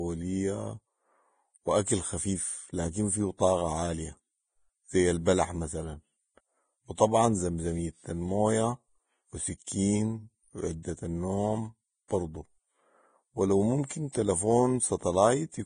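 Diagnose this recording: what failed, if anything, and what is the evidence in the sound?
The codec stage failed throughout this speech. Nothing is present above 9.7 kHz, and the upper band that remains is hissy and grainy, with roughened tones and softened consonant onsets. That heavy damage is likely Vorbis compression at a low setting, which fits a bitrate around 22 kbps: the encoder lowered its cut-off and quantised the treble residue so coarsely that detail turned into noise of similar energy. A plain low-pass filter would sound dull but clean, not gritty like this.

A pre-echo, also from the codec, sits from 12.08 to 12.10 s. A short hiss of about 23 ms runs just ahead of a sharp onset, and the attack itself sounds smeared. The transform block holding that onset spread its quantisation noise evenly across its length, so noise sized for the loud attack leaked into the quiet moment before it. 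A click or dropout would be abrupt and would not rise into the following attack.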